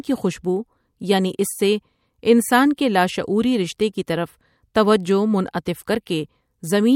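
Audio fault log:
2.77 s, pre-echo: a brief hiss about 10 ms long, roughly 10 dB above the surrounding floor, leads into a sharp speech onset and softens its edge. The codec spread quantisation noise across a long block, which fits a 26 ms window with no short-block switching.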